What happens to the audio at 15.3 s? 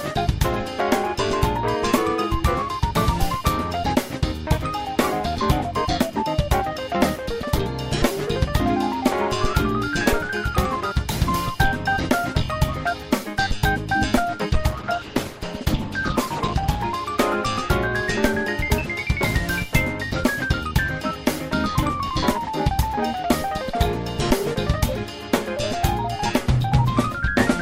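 A call bitrate drop covers 15.3 s, running from 14.51 s to about 16.87 s. The connection's bandwidth estimate fell and the encoder was pushed to a far smaller bit budget for about 2.3 s. The degradation points to a fall from roughly 96 kbps to around 13 kbps. With so few bits the codec quantises coarsely and sheds the upper frequencies, so the sound turns rough, watery or muffled until the rate recovers.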